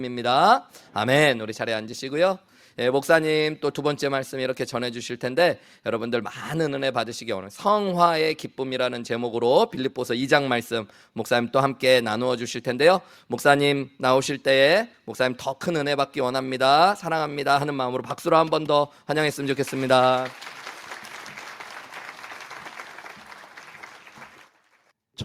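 No technical faults can be heard anywhere in it.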